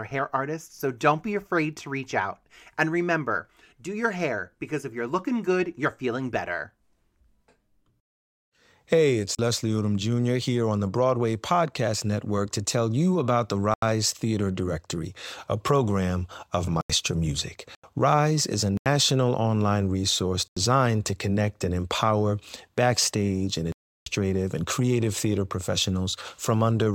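Blocks of digital silence at 9.35, 13.74, 16.81, 17.75, 18.77 (between "is a" and "online resource"), 20.48 and 23.72 s (after "and empower backstage and") cut the speech out with no fade. The first is 37 ms, the next five 85 ms, the last 341 ms. The equal lengths fit a 4096-sample buffer at 48 kHz left unfilled in time, with the long hole four such buffers.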